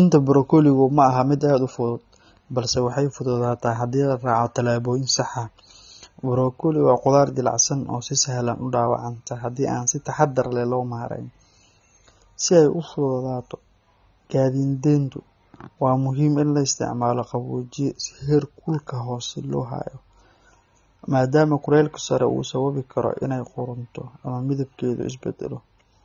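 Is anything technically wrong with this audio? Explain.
Yes. Throughout the speech the sound is dull and smeared, with a fizzy, warbling texture on sibilants and held sounds. The likely cause is AAC compression at a low rate, consistent with roughly 24 kbps, which lowers the high-frequency cut-off and leaves spectral holes.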